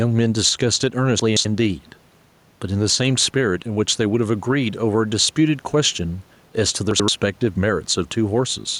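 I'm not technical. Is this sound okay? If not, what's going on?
No. Throughout the clip the volume keeps getting pushed up and then pulled back down whenever the speaker gets loud. That is gain pumping. The swing is modest, but it makes loud and soft moments sit closer together and gives the speech a squashed feel. The likely cause is a microphone level set too high, with an automatic limiter pulling the volume down on each loud sound and letting it back up in the gaps.

There are two brief jumbled moments, from 1.20 to 1.45 s and from 6.91 to 7.08 s, where the speech stumbles. These are chunks out of order. The audio travels in small pieces, here about 85 milliseconds each, and one piece turned up late and played after one or two pieces that should have come after it. Nothing is missing, but the order is scrambled, and each misplaced piece leaves hard joins. The faint room noise underneath belongs to the recording itself.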